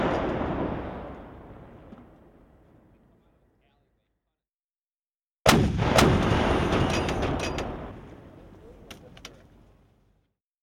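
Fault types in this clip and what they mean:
Doubled audio track: The audio was likely captured a second time by a slower path, or an edit left two copies out of step, so the same sound is mixed in twice. From 5.95 to 7.91 s, a full-band copy trails the original by about half a second at roughly the same loudness. It has no decay or room colour, and it starts and stops abruptly at those edges.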